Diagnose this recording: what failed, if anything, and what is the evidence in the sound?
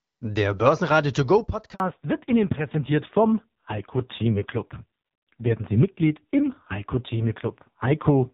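At 1.74 s the speech falls silent for 60 ms, ending at 1.80 s, and what was said in that span is gone. This is a handover gap at the network stage: the call moved between networks and no speech frames arrived during the switch.

From 1.80 s to the end, everything above 4 kHz is missing. The speech turns dull and rough next to the clear HD Voice before the gap. This is a fallback to narrowband, a codec switch from AMR-WB to AMR-NB at a low rate, which fits roughly 5.9 kbit/s.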